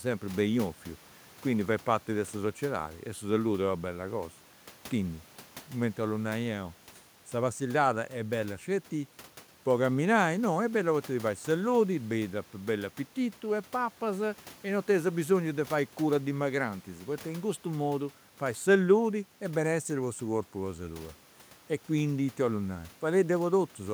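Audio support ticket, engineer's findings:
Nothing to flag on this speech recording: the only thing in the background is the room's own noise, sitting about 28 dB below the speech, which is just how the room sounds and not a system fault.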